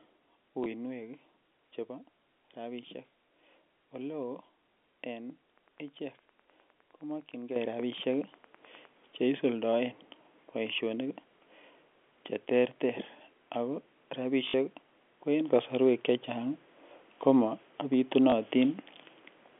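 Speech over a telephone-band line of roughly 250 Hz to 3.4 kHz, with G.711 coding, carries three kinds of fault. Packet loss with the last packet repeated occurs at 0.64 to 0.66 s, 14.48 to 14.54 s and 18.30 to 18.32 s: the receiver replays stale audio, producing, in the 60 ms middle gap, a brief robotic buzz consistent with 20 ms packets. Wi-Fi interference from a nearby radio is rectified by the audio circuit from 5.55 to 8.87 s, giving steady ticking every 102.4 ms, about ten per second, well below the speech. The microphone volume is stepped up twice by the call software, at 7.56 s by about 10 dB and at 15.48 s, just after "ko en", by about 5 dB, so voice and background jump louder together.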